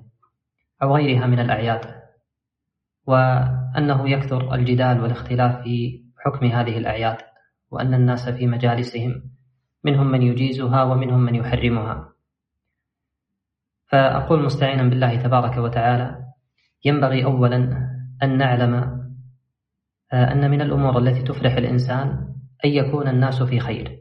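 Sound cut by the noise suppressor at 0.0–0.29 s, 5.95–6.2 s, 7.25–7.46 s and 9.19–9.6 s: the suppressor mistakes parts of the audio for noise and pulls them down by about 22 dB (about 14 dB at 7.25 s), so those stretches sink in level.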